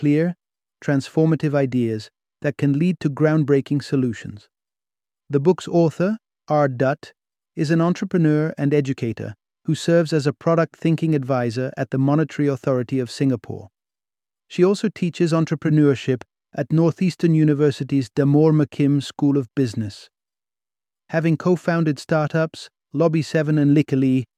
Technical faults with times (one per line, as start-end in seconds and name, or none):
none